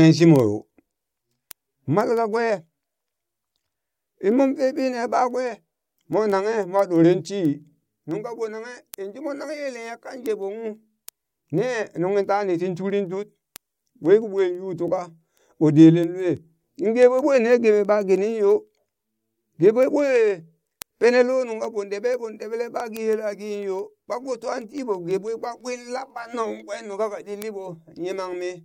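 From 0.19 s to 28.58 s the speech carries a steady train of sharp ticks of uneven strength, recurring roughly every 0.15 s, well over a hundred in all. These are word clock ticks. The receiving device was running on its own clock rather than locking to the digital source, and the two drifted apart by roughly 150 ppm. Each time they slipped past each other, a single sample was dropped or repeated and its neighbours were misread.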